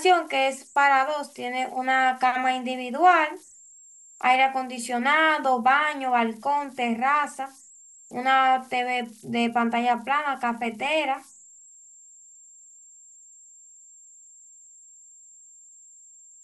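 Speech runs the whole way through with converter idle tones: a whistle around 7 kHz in the pauses, plus grainy noise under quiet passages, sitting about 28 dB below the signal. That's an undithered delta-sigma converter cycling through repeating bit patterns.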